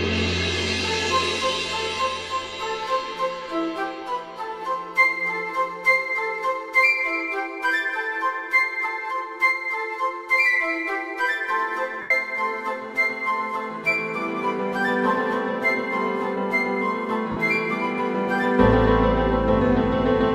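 At 12.01 s a brief noisy smear replaces the sound for about 90 ms, and at 17.31 s a shorter one lasts about 50 ms. These are lost LE Audio frames: the LC3 decoder refilled the gaps with the last spectrum under random signs, fading it as the losses continued.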